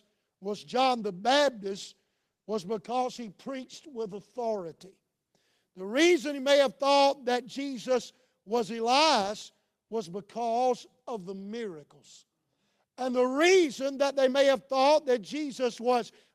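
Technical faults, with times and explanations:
0.73–5.67 s, call bitrate drop: speech turns rough and dull for about 4.1 s as the encoder codes more coarsely, which fits a fall from 32 to 17 kbps.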